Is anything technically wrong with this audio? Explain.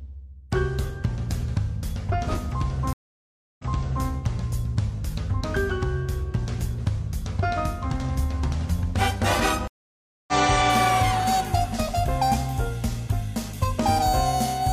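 Yes. There are two stream reconnect faults, at 2.93 to 4.06 s and at 9.68 to 10.33 s. Each time the connection dropped, the player fell silent, then reconnected and started a fresh decoder partway through the stream. The first gap lasts about 0.66 s, and the audio returns roughly 0.46 s earlier than where it broke off, as if the server resent a burst, so a short stretch repeats. The second gap lasts about 0.6 s, and the audio picks up around 0.4 s later, so a piece of sound is skipped.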